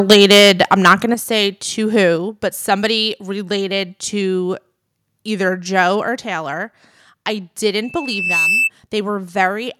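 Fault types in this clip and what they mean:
Microphone overload: The microphone input was likely set too high, so the loudest peaks of the speech ran past the converter's ceiling by about 8 dB and had their tops sheared off. From 0.09 to 0.94 s a few percent of the samples are flattened at the converter's limit, giving the opening syllables a harsh, crackly, gritty edge instead of clean peaks.
Microphone volume stepped down: The call software likely reacted to the clipped input by cutting the device's input volume in single jumps rather than gradually. The speech and the background drop together, first by about 4 dB at 0.13 s, right inside the distorted opening, then by about 7 dB at 1.14 s, just before "say to". Each change is an abrupt step in loudness with no fade.
Loudspeaker feedback squeal: Sound from a loudspeaker was picked up again by the microphone feeding it, and at one frequency the loop gain rose above one, so that frequency fed on itself. 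A single tone at 2.6 kHz appears at 7.83 s, swells over roughly half a second to about 5 dB above the speech, and holds as a piercing whistle until 8.70 s.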